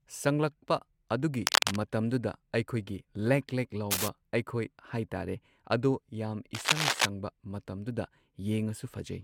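It's a speech recording, and the whole thing has a swirly, hollow, smeared quality, with consonant attacks softened and nothing above 17.4 kHz. That's more damage than a single encode would leave, so this is likely generation loss: the audio went through a lossy codec a few times, each pass quantising on a fresh frame grid so the noise and spectral holes piled up. The character points to AAC at around 96 kbit/s. On top of that there are three bursts of cable scratch noise, dense and uneven rustling at 1.42 to 1.76 s, 3.90 to 4.08 s and 6.55 to 7.06 s. The first and last sit a little above the speech level and the middle one is roughly level with it. They're likely from a worn cable or connector being moved, with the contact resistance jumping around while it shifted.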